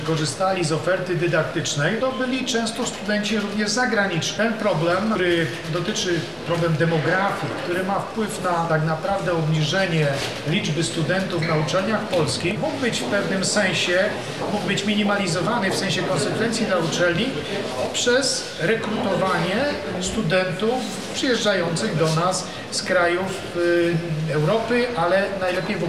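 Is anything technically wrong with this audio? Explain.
No, nothing in this audio points to a technical fault.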